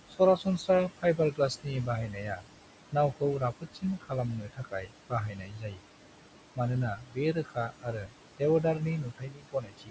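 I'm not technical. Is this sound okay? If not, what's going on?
No. The call's noise suppressor is pulling down the room's background hiss throughout. That leaves noise suppressor artifacts: the hiss dips away between words and swells back under them.

The same suppressor is also causing speech cut by the noise suppressor. It mistakes parts of the speech for noise and turns them down. Soft sounds and word endings come out swallowed or faint from 0.09 to 2.47 s, 2.92 to 5.83 s, 6.95 to 8.64 s, and 9.04 s to the end. The first, third and last stretches each lose under a second in total, and the middle one loses about a second and a half.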